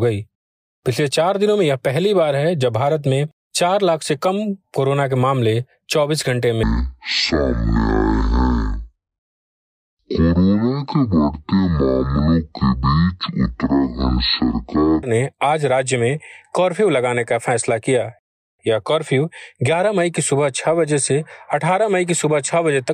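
From 6.63 to 15.03 s a section at the wrong speed plays at half speed, likely from being clocked at the wrong rate, so the speech drops roughly ten semitones and drags. A spectrogram shows harmonics and formants squeezed downward, and the waveform stretches visibly wider.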